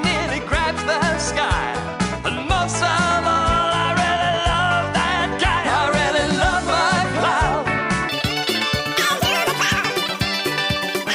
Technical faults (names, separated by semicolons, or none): wrong sample rate